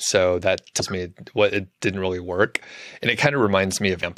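At 0.79 to 0.81 s, just before "me what it didn't", and again at 4.02 to 4.04 s, damaged data in the compressed stream makes the decoder misread frames and resynchronise, giving a brief glitch. A spectrogram shows each as a short disruption, and the waveform shows an abrupt discontinuity.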